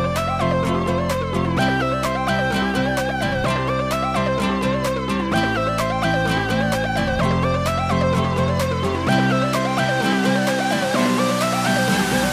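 At 8.57 s there is a single sharp click. It sounds like dropped samples, likely a couple of samples lost from the stream. The waveform jumps straight to a later value. The gap is only a fraction of a millisecond, so no sound goes missing.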